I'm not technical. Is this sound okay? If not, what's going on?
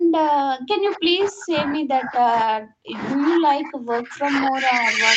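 No, there's a problem that runs the whole way through, from the start to about 5.2 s. The speech keeps sinking in level, losing its crispness and breaking into choppy pieces, and at its worst it drops to almost nothing. That's the pattern of speech suppressed in double talk. Both ends of the call were likely talking at once, and the echo canceller couldn't tell this speaker apart from the echo of the other person, so it turned everything down.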